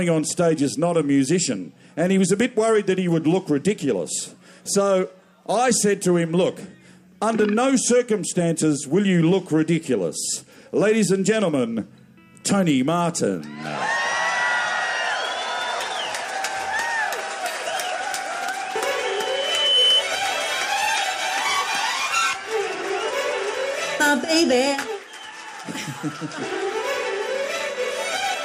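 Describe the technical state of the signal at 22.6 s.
Nothing is wrong with the signal at 22.6 s; the audio is intact there.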